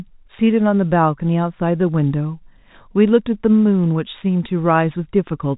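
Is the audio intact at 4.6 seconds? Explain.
Yes, the audio is intact at 4.6 seconds, with only the narrow telephone band of G.711 coding, nothing above about 3.8 kHz, to be heard there.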